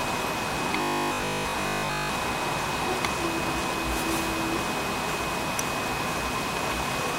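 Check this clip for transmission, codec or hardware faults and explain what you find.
One fault stands out, robotic sound from repeated short buffers, from 0.77 to 2.11 s. The audio turns into a rigid, metallic buzz at 50 Hz, likely from a stalled stream replaying its last 20 ms chunk for most of that stretch. Unlike plain dropouts, no silence appears; the repetition itself imposes a fixed pitch.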